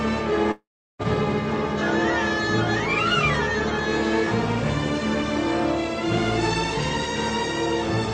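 At 0.51 s the sound breaks off until 1.02 s. The last sound stretches into a fading buzz, then 0.36 s of silence follows. When the audio returns, 0.48 s of it is simply gone. The cause is likely a long network dropout.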